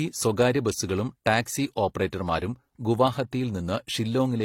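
From start to finish, the speech carries two layers of coding damage at once. Nothing is present above 16.3 kHz, so the top end sounds sealed off. The different artefacts of each codec are heard together. This points to transcoding between lossy codecs, likely AAC at a moderate rate followed by HE-AAC at a lower one. The second encoder spent bits on the first one's artefacts and added its own.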